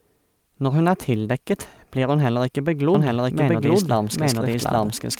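It's a speech clip, and from 2.95 s to the end there's a doubled audio track: an equally loud, dry copy trailing about 0.7 s behind, likely a second, slower capture path.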